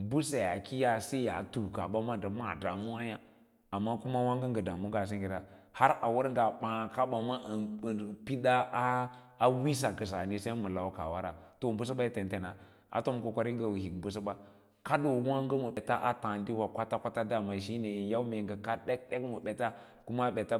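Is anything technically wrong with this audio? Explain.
Yes. At 15.77 s, just before "a taadiwa", compressed frames are skipped: one roughly 93 ms frame goes missing, so the speech jumps ahead about a tenth of a second.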